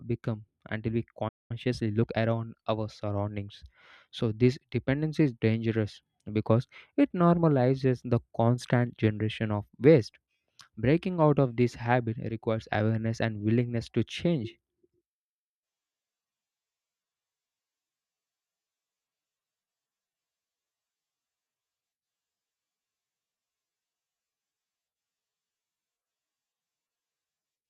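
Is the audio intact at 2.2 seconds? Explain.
No. From 1.51 to 2.35 s, between "become until we" and "our surroundings so this", time-compressed catch-up hurries the speech at 1.25x by splicing out and cross-fading short pieces. Pitch stays put. A spectrogram shows squeezed syllables, unchanged harmonic spacing, and splice seams.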